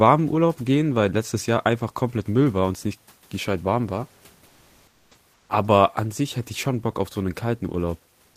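Comfort noise in place of the background at 4.47–5.11 s, after "nicht gescheit warm war", and 5.33–5.49 s in this speech clip: the real room noise, about 39 dB below speech, gives way to flat synthetic hiss, about 4 dB quieter the second time, likely from Opus-style discontinuous transmission.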